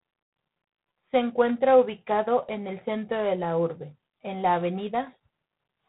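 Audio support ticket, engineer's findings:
Harsh, rasping hiss riding on the speech throughout, rising and falling with its level; no content above 3.9 kHz. Probable component: G.726 ADPCM codec. Samples coded as coarse differences from an adaptive prediction, so quantisation noise tracks the signal. Roughness and band limit fit the 24 kbit/s mode, one bit below DECT's 32 kbit/s.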